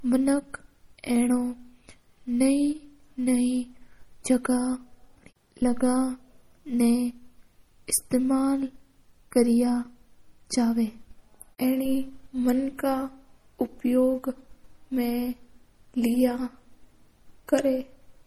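Throughout the speech, plainly audible watery, swirling artefacts, chirpy s sounds and smeared onsets point to likely MP3 compression, consistent with a low bitrate near 48 kbps.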